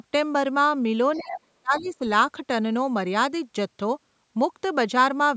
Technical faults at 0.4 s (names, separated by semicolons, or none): none